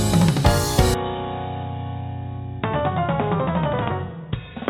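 From 0.94 s to the end, the sound abruptly turns dull and boxy, with nothing above 3.8 kHz, a level drop of around 5 dB, a faint new noise floor and no gap at the change. This likely comes from the input switching to a poorer device.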